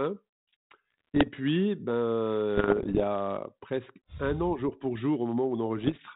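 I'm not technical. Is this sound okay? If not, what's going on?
No. There are bit errors on an ADPCM link, the digital connection a cordless phone uses, at 0.90 to 1.29 s, 2.55 to 3.02 s and 5.78 to 6.01 s. Each corrupted bit throws the decoder off briefly, causing pops, rough bursts and quick jumps in loudness.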